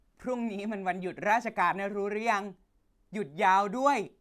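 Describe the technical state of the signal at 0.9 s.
At 0.9 s the signal is intact, with no dropout, distortion, clicks or other audible fault at that point in the speech.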